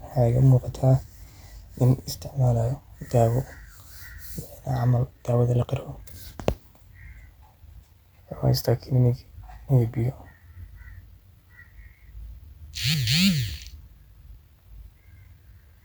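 Speech recording, no technical faults detected on listening.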